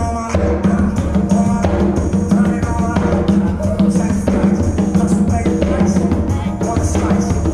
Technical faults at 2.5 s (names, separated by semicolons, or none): none